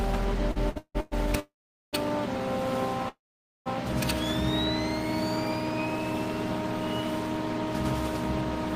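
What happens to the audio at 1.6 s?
At 1.6 s you're right in the middle of a call audio freeze running from about 1.40 to 1.95 s. The last bit of sound gets stretched into a short fading buzz, then there's roughly 0.44 s of silence before the audio picks up right where it left off. Nothing's actually lost; it's just pushed about 0.53 s later. Likely cause: packets got held up in transit and the jitter buffer ran dry.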